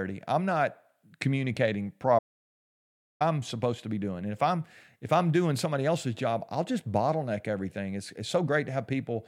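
At 2.19 s the speech cuts out abruptly into an audio dropout to silence lasting about 1.02 s, until 3.21 s, likely from the input signal being lost while silence kept recording. The waveform flatlines, and the spectrogram shows an empty band with no room tone.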